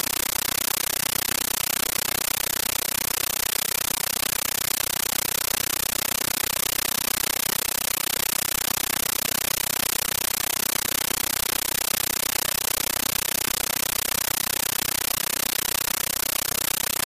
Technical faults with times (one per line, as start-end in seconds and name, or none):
0.00-17.06 compressed stream played as audio